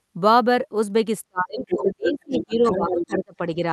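From 1.28 to 3.39 s the speech dips and breaks up in pieces, about a second and a half in all. At its deepest it drops by about 30 dB. This is speech suppressed in double talk. The echo canceller likely heard both sides at once and turned the talker down along with the echo.

A second voice comes through at 1.66 to 1.89 s, 2.05 to 2.13 s and 2.33 to 3.17 s. This is the other side's voice leaking through. It sits about 5 to 10 dB below the talker. It is likely loudspeaker echo that the canceller failed to remove.

At 3.56 to 3.63 s a brief, shallow dip of about 5 dB follows. This is speech suppressed in double talk again.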